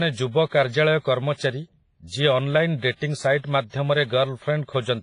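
From start to finish the speech carries heavy transform-codec damage, likely WMA compression at a low bitrate, which fits something near 24 kbps. Nothing survives above 10.5 kHz, and quantisation noise smeared over long blocks leaves a ringing, washy haze whose hiss swells and fades with the speech itself. That signal-following breathing separates it from steady background hiss, and the long-block smear around onsets separates it from a simple low-pass filter.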